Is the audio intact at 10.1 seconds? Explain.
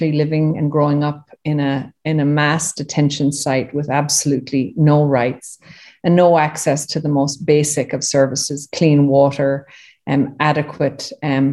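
Yes, at 10.1 s the audio is intact, with no fault audible at that moment.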